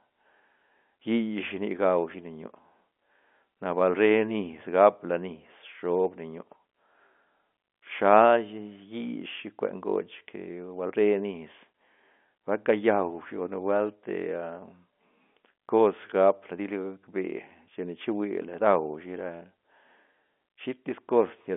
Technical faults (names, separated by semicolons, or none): none